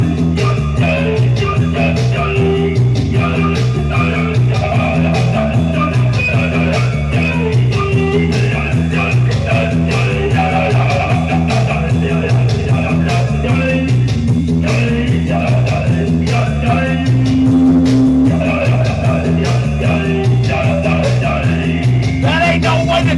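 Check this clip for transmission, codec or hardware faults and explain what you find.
Nothing stood out on listening to this recording.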